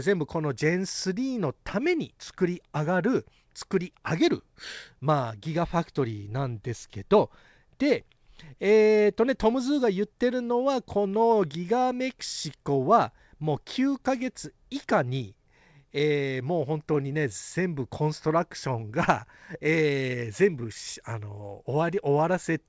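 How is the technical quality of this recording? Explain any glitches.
The technical quality holds up, and there are no glitches to explain.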